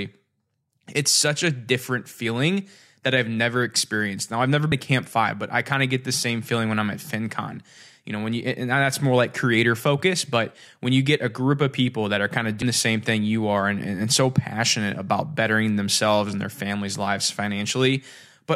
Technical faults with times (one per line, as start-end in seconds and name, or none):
4.72 damaged data in a compressed stream
12.62 damaged data in a compressed stream